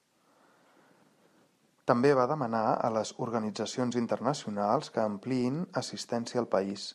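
Nothing in this one stands out on the technical side, as the speech carries on with no audible faults at any point.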